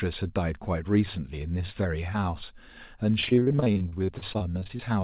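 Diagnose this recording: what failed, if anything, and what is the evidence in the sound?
From 3.2 s to 4.81 s the speech turns choppy and robotic, with short holes, the longest about 38 ms, repeating throughout the stretch and roughly a third of it patched over. This is repeated packet loss on the network stage: packets kept arriving late or not at all, and the receiver's jitter buffer concealed each gap by stretching the last good sound, producing the robotic texture. Throughout, the band stops at 4 kHz, which fits a G.711 call codec.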